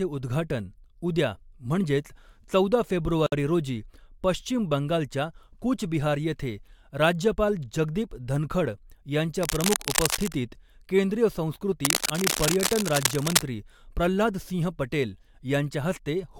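A gap at a join of encoded pieces falls at 3.26 to 3.32 s, right after "उद्घाटन उद्या म्हणजेच चौदा" and before "रोजी पश्चिम बंगालच्या कूच". The speech drops into a silence of about 59 ms with smeared edges, then resumes exactly where it broke off. Two separately encoded segments were butted together untrimmed, so the encoder's start-up delay and end-of-stream padding remain as dead air in the middle of the sentence.

Cable scratch noise appears from 9.38 to 10.38 s, a dense, irregular crackle sitting a little below the speech level. It returns more strongly from 11.85 to 13.43 s, ending just before "प्रह्लाद सिंह पटेल", this time about as loud as the speech. Both bursts sound like scratching or rustling layered over the audio, likely from a worn cable, connector or control being moved so that its contact resistance jumped around rapidly.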